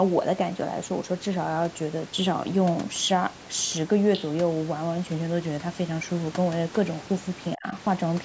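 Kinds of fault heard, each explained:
Other side's voice leaking through: Around 4.13 to 4.26 s a second voice slips in, about 10 dB under the main speech. It's likely loudspeaker echo from the far end that the echo canceller didn't fully scrub from the microphone signal.
Speech suppressed in double talk: At 7.55 to 7.66 s the speech suddenly drops deeply, by roughly 35 dB, for about a tenth of a second. That's likely the echo canceller seeing both sides talking at once and ducking everything, including the local talker.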